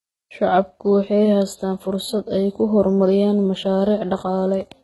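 Across the whole clip, the speech is heavily degraded, likely by HE-AAC compression. Nothing sits above 11.8 kHz, and the treble sounds synthesized by copying lower bands upward: s sounds turn gritty and metallic. The damage fits a bitrate around 16 kbps.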